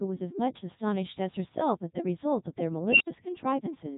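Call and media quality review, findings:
Codec 2 vocoder, whole clip: speech robotic and buzzy, heavy codec damage, nothing above 3.8 kHz. Consistent with Codec 2 at its 3.2 kbit/s mode. The decoder rebuilds speech from sine waves using pitch, voicing, energy and spectral envelope; the original waveform is discarded.

Unstable filter, 2.88 to 3.08 s: a tone of roughly 3 kHz swells over 118 ms, clips, then an 80 ms dropout. A recursive filter with bad coefficients diverged, overflowed, and output muted until reset.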